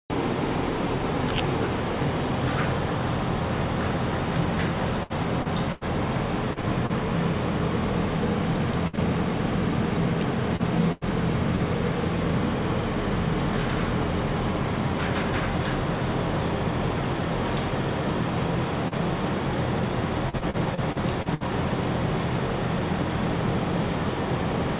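Packets kept going missing or arriving too late between 5.03 and 6.92 s: six gaps, the longest 87 ms, about 13% of that stretch concealed. This is repeated packet loss (robotic sound). Each hole was bridged by extending the last sound, and the next hole came before the audio could settle. The result is a choppy texture with pieces missing, with roughly a quarter second of real sound lost across the stretch.

At 8.87 s a burst of packet loss removed about 60 ms in one run. The receiver held the last sound and faded it down over that span, so a brief buzz or fading hiss replaces the audio. Playback then picks up slightly further on, with the part in between gone.

The same repeated loss returns from 10.56 to 11.62 s, with three gaps, the longest 92 ms, covering about 15% of the span. It is audible as the same chopping.

At 18.88 s a short concealed packet loss of about 30 ms never reached the decoder in time. 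The receiver patched it by continuing the last sound and blended back in, which leaves a quick smear or wobble.

From 20.29 to 21.43 s the repeated packet loss is densest: seven gaps, none longer than 59 ms, with about 22% of the span concealed. The choppiness here is the most continuous in the clip. All of this sits on a narrow call path that carries nothing above 4 kHz, which fits G.711 mu-law at 64 kbps.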